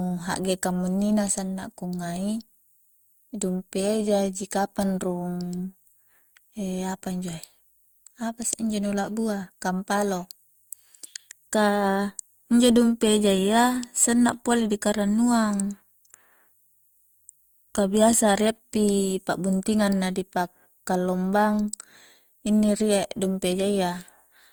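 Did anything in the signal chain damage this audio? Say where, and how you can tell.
Yes, at the codec stage, throughout the speech: swirly, hollow generation loss, likely from about three Opus passes near 48 kbit/s; spectrograms show smeared onsets and nothing above 20.1 kHz.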